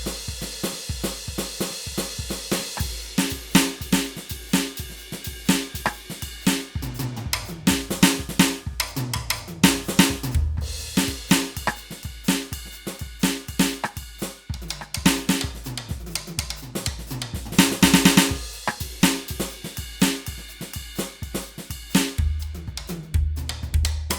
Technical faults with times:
none

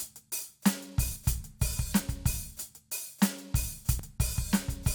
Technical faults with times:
1.16 dropped buffer (overrun)
2.00 dropped buffer (overrun)
2.97 dropped buffer (overrun)
3.99 dropped buffer (overrun)

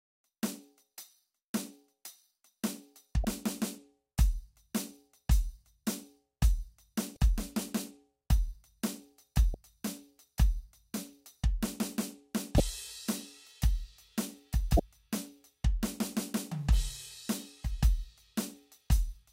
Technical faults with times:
3.22-3.25 damaged data in a compressed stream
7.13-7.17 damaged data in a compressed stream
9.51-9.54 damaged data in a compressed stream
12.57-12.60 damaged data in a compressed stream
14.76-14.80 damaged data in a compressed stream

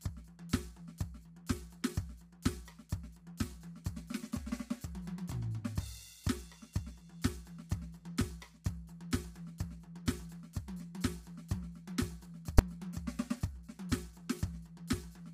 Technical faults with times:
0.00-15.33 low-delay AAC compression
12.59 invalid numbers at full scale

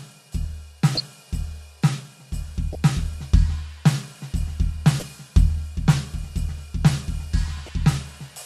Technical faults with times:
0.95-1.02 corrupt frame decoded
2.73-2.75 corrupt frame decoded
5.00-5.04 corrupt frame decoded
7.66-7.69 corrupt frame decoded

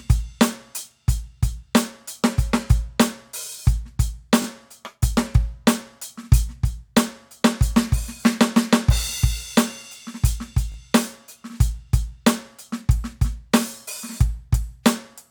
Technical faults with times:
4.42-4.46 repeated buffer
10.72-10.76 repeated buffer

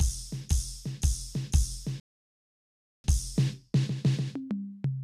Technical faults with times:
2.00-3.04 rebuffering stall

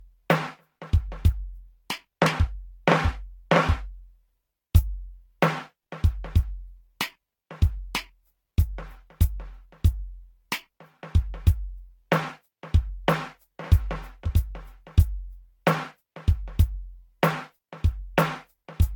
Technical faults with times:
0.00-18.96 generation loss

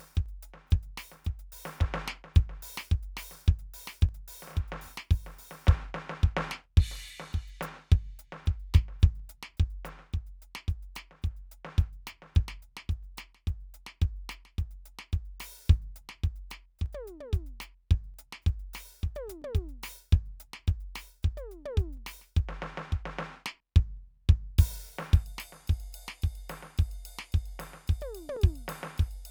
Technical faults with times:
0.26-28.36 clock drift buffer slips

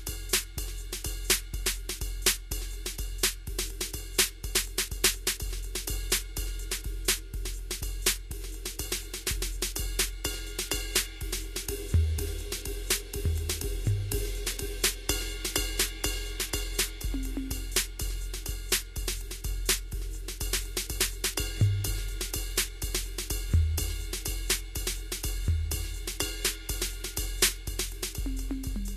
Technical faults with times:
0.00-28.97 Vorbis compression

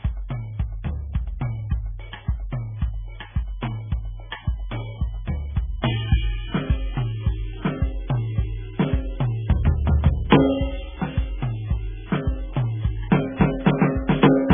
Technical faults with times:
0.00-14.54 MP3 compression
2.74-14.54 USB whine

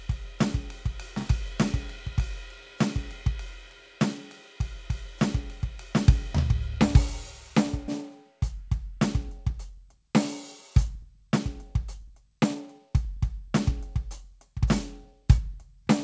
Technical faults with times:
7.88-7.90 skip ahead
8.52-10.13 jitter buffer speed-up
10.88-15.83 jitter buffer speed-up

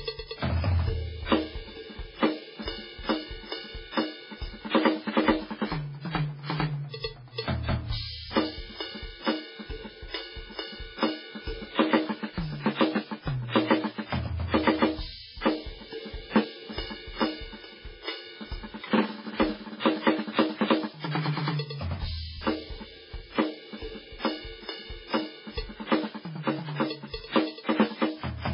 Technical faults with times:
0.00-28.53 MP3 compression
4.70-4.74 pre-echo
19.80-19.85 pre-echo

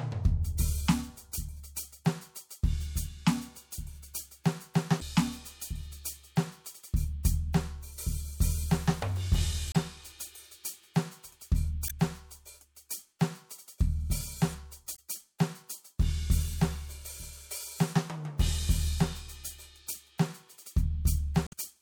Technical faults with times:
4.98-5.02 damaged data in a compressed stream
9.71-9.76 damaged data in a compressed stream
11.86-11.91 damaged data in a compressed stream
14.92-14.99 damaged data in a compressed stream
21.45-21.53 damaged data in a compressed stream

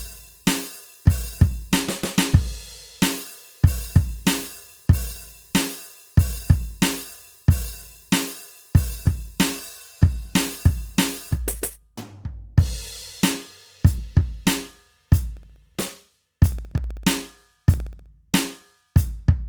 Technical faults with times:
0.00-19.49 Opus compression
15.37-18.06 periodic USB or driver dropouts

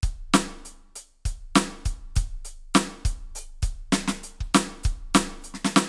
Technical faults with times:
none

